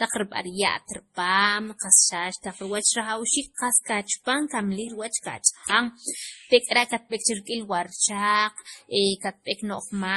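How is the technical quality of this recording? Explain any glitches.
The speech is audibly degraded by layered compression. Throughout the clip, nothing is present above 12.1 kHz, and two distinct sets of artefacts sit together: the artefacts of both codecs are heard at once. The likely cause is transcoding between lossy codecs, consistent with a low-bitrate MP3 around 32 kbit/s later re-encoded as Opus around 48 kbit/s. The second encoder wastes bits reproducing the first one's damage, adds its own, and cannot restore the lost top end.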